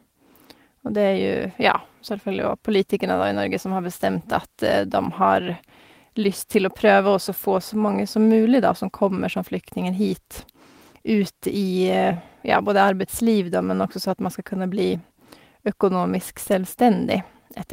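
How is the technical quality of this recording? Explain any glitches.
The recording has no glitches to explain. Nothing in this speech clip points to a fault in how it was captured or delivered.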